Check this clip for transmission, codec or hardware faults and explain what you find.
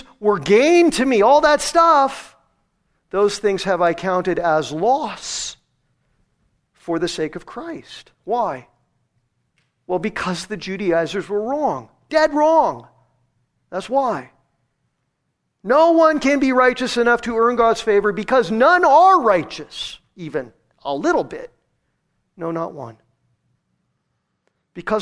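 Nothing stood out on listening to the speech in this clip.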